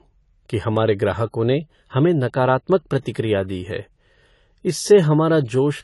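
All the way through, the speech sounds dull and smeared, with nothing above about 11.5 kHz and a watery, fizzy edge on the sibilants. That's likely AAC compression, AAC-LC, squeezed hard enough that the codec damage is plainly audible, which fits a low bitrate around 32 kbps. To stay within budget the encoder drops the top band entirely and quantises the rest coarsely, so detail gets thinned out and smudged.

Then at about 3.03 to 3.06 s, right after "ग्राहकों ने हमें नकारात्मक" and just before "दी है", you get a short pre-echo. A short hiss arrives roughly 26 ms ahead of a sharp onset, and the attack itself lands soft instead of crisp. The transform spreads its quantisation noise across the whole block, so noise meant to sit under the loud attack leaks into the quiet moment before it.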